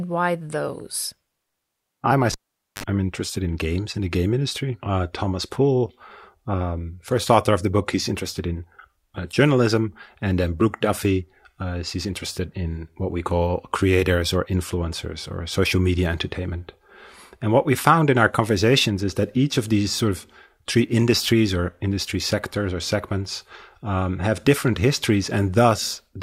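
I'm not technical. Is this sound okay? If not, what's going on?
No. There is a cable pulled and plugged in fault between 2.32 and 2.84 seconds. A live cable was yanked out and pushed back in while recording. You hear a pop, then the speech drops to near silence for about half a second (470 ms). As the plug goes back in, its tip touches first and picks up a short burst of mains hum, about 50 ms of 50 Hz buzz, before a second pop brings the sound back.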